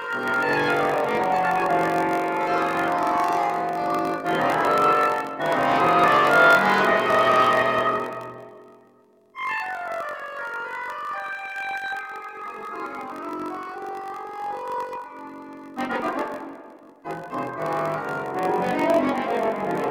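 A buzz at about 46.9 Hz runs throughout, with the audio slowed to 0.938 speed while the timbre is kept, pointing to a padded block size mismatch, consistent with 1024-sample reads filled with zeros.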